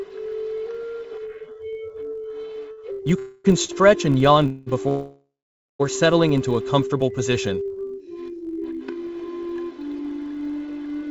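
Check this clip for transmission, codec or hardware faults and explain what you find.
Several faults are present: a constant block-rate buzz, a stuttering passage, three freezes and one hurried stretch. The call path's content stops at about 7 kHz, which fits G.722.

Filter restarted on every block, throughout: the filter drops its state at each block boundary, which fits a 1024-sample block. Every restart adds a small transient, heard as a 46.9 Hz buzz that rises and falls with the signal's level.

Repeated stalls (stutter), 2.72 to 3.71 s: packets kept arriving late, so the jitter buffer emptied four times and each gap was bridged with continued sound, the longest about 61 ms. The audio drags and stutters there.

Call audio freeze, 3.19 to 3.46 s and 4.46 to 4.69 s: the sound hangs as a fading continuation for about 256 ms and 202 ms, then resumes where it stopped, likely because packets were held up in transit.

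Call audio freeze, 4.89 to 5.81 s: this 910 ms hold fades into about 500 ms of silence before the audio picks up again with nothing lost.

Jitter buffer speed-up, 7.83 to 8.62 s: the buffer held excess audio, so short pitch-period pieces totalling around 70 ms were cut. The sound runs at 109% speed with unchanged pitch and feels hurried.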